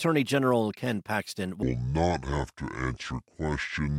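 At 1.63 s the speech drops into a section at the wrong speed and stays there to the end, playing at about 0.61 times normal speed. Pitch sinks with it, roughly ten semitones, so it turns deep and dragging, likely from a mismatched playback clock.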